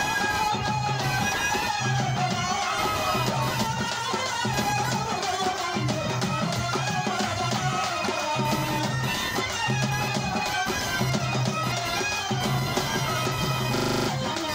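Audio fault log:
Throughout: computer activity noise, a buzzy, chirpy whine pulsing at around 1 kHz and sitting only about 10 dB under the sound. It tracks the machine's processing load rather than the audio, because that load keeps shifting the ground the audio circuit shares.
13.76–14.08 s: system hang loop. The same 40 ms slice repeats eight times at 25 Hz, giving a rattling stutter. The system stalled while the audio hardware kept replaying its ring buffer, which swallowed roughly a third of a second of real sound.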